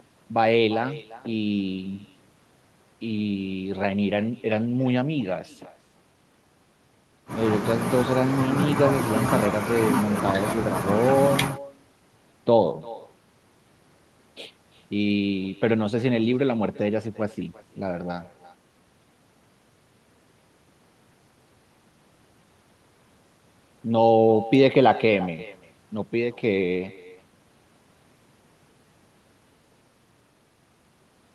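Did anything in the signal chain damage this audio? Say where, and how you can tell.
Yes, call processing: echo with no canceller. The far end's speaker leaks into its mic, so the speech comes back throughout, roughly a third of a second late and about 20 dB down.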